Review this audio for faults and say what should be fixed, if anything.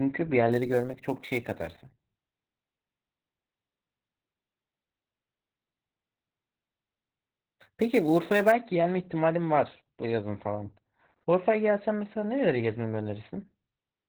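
The whole clip sits behind heavy Opus voice compression. Nothing survives above about 4.3 kHz, so the speech is boxed into narrowband and sounds muffled, a bit hoarse and faintly robotic. That's the SILK linear-prediction coder squeezing the excitation hard at a very low rate, which fits something around 8 kbps. To prevent it, give the encoder more bitrate so it can keep wideband.

From 0.52 s to 8.52 s there's sample clock jitter on top of that. The converter's clock is wobbling, on the order of 10 microseconds, so each sample lands slightly early or late. The resulting error tracks the waveform's slope and sits roughly 25 dB under the signal. You hear it as a grainy hiss that swells on louder, brighter syllables and drops out in the pauses. To prevent it, clock the converter from a clean, stable reference.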